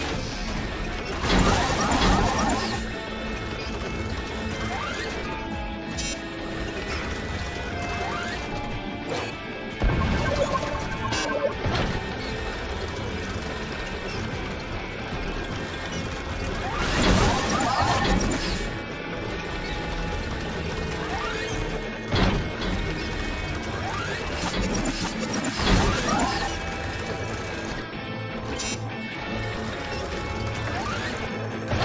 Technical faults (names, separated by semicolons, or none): resampler restarted on every block